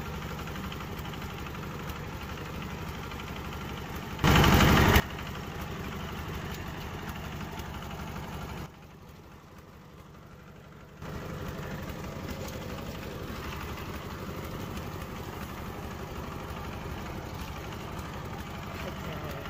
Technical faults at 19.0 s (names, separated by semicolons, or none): none